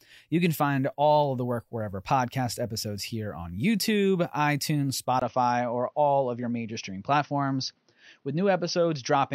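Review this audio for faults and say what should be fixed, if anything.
At 5.2 s the speech turns dull after a brief 20 ms gap, likely an input switched to a poorer device. On a spectrogram, everything above 6.4 kHz vanishes from there to the end, with a faint new noise floor. Lock the recording input to one device and disable automatic switching to headset call profiles.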